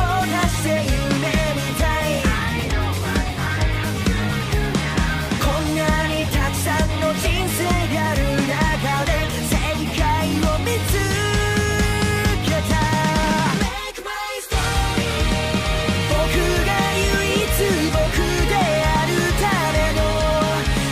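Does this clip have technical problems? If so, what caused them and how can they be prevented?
No, nothing here sounds wrong to the ear, so there's nothing to trace back or guard against this time.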